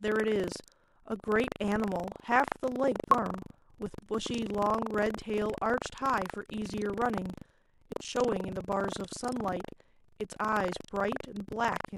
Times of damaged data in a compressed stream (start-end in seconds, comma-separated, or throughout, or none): 3.11-3.14, 5.16, 7.92